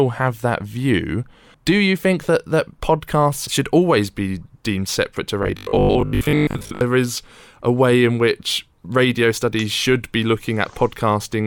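A speech recording that turns into a robotic sound from repeated short buffers between 5.43 and 6.81 s, after "be deemed separate to" and before "is a way in". A rigid 50 Hz buzz, likely from a 20 ms buffer looping over most of that stretch, follows the speech only roughly, unlike mains hum, which stays separate from the voice.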